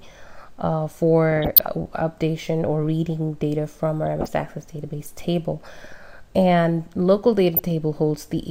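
Bursts of burbling noise break over the sound at 1.32–1.67 s, 4.03–4.28 s, 5.81–5.92 s and 7.54–7.71 s. This is DAB burbling: weak reception lets bit errors, a fraction of a percent, slip past error correction, corrupting MP2 audio data so individual sub-bands blip or jump in level for up to a frame.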